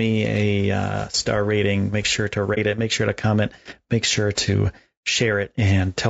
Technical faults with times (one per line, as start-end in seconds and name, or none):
0.00-6.09 low-delay AAC compression
2.54-2.58 AAC frame loss with muting